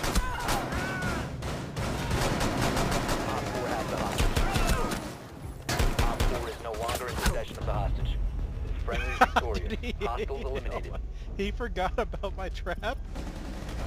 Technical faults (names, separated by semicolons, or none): none